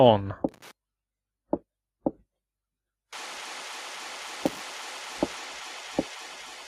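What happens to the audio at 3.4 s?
At 3.38 s there is a repeated buffer: a 1.33 ms block, which fits a 64-sample buffer, plays twice more because new audio arrived late, giving hard joins heard as a click or brief buzz. Unlike a dropout, essentially nothing is lost; audio repeats rather than vanishing.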